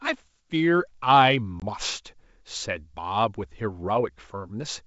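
From 1.60 to 1.63 s, packet loss on an ADPCM call drops about 20 ms of audio, roughly one packet, replaced by silence. The decoder's predictor and step size then disagree with the sender's, so speech returns after the sharp-edged gap with brief distortion.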